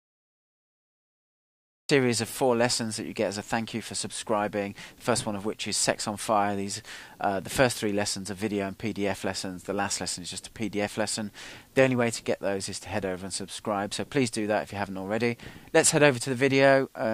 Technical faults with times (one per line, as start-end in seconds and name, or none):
0.00-1.89 cut-off start